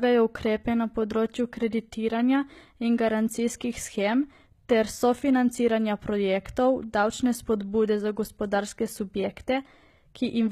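Throughout the speech, s sounds are gritty and lispy and nothing is above 14.9 kHz, likely HE-AAC compression near 20 kbps. Its rebuilt treble stays bright rather than going dull.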